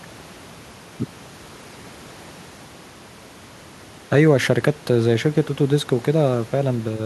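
No technical faults can be heard in the speech recording, and the only other sound is the room's own background noise, which sits about 27 dB below the speech.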